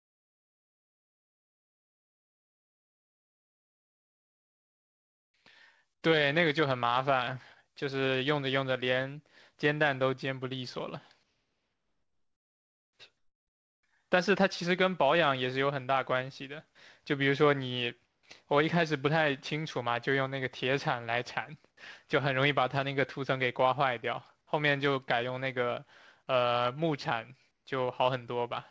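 From 5.36 to 5.79 s a jitter buffer slow-down stretches the speech to about 91% speed, adding 48 ms by repeating single pitch periods. Pitch stays put while sounds drag. On a spectrogram the harmonics hold level but lengthen, and the waveform shows near-identical cycles repeated back to back.

Right after, from 5.88 to 6.74 s, a jitter buffer speed-up runs the speech at about 106%, trimming around 50 ms in short pitch-period cuts. It sounds briefly hurried at unchanged pitch. Formant tracks look compressed in time, and the waveform shows slightly shortened syllables without visible gaps.

In the pauses at 11.23 to 12.99 s, 18.05 to 18.23 s, and 27.51 to 27.65 s, the quiet background, around 50 dB below the loudest speech, gives way to a flat, featureless hiss about 4 to 5 dB quieter. This is likely comfort noise in place of the background, inserted during silence by discontinuous transmission. 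A spectrogram shows the textured floor becoming a smooth, uniform wash that stops below 8 kHz. That cutoff matches the rest of the clip and fits a wideband codec such as G.722.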